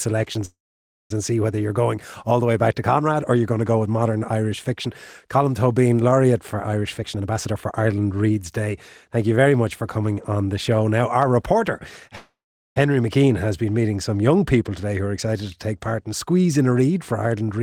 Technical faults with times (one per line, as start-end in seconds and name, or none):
0.45-1.12 call audio freeze
6.82-9.53 jitter buffer speed-up
12.15-12.78 call audio freeze